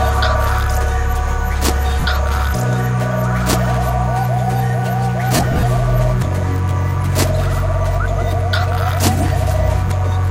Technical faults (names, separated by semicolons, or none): mains buzz; lost LE Audio frames